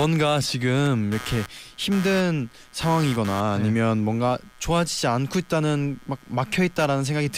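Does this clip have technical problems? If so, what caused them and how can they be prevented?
Yes. Computer activity noise runs through the whole speech clip: a buzzing, chirping texture pulsing around 150 times a second, sitting roughly 20 dB below the speech. It rises and falls with the computer's workload rather than with the speech, because processor, graphics or mouse activity draws changing current through a ground shared with the audio circuit. Prevent it with an external USB interface, a ground-loop isolator, or by powering the audio path separately from the computer.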